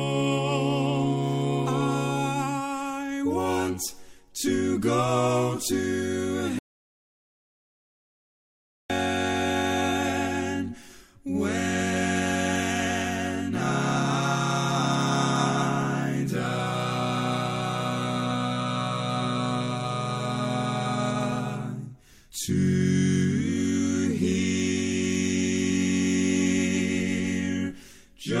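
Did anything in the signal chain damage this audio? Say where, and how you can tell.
Yes. There is an audio dropout to silence from 6.59 to 8.90 s, about 2.3 s of lost signal. The sound stops abruptly mid-flow and resumes just as suddenly, and the gap holds silence with no room tone, so the input stage likely lost its source, through a disconnected device, a failed link or a mute, while the recorder kept writing. On a waveform it shows as a flat line, and on a spectrogram as a blank vertical band across all frequencies.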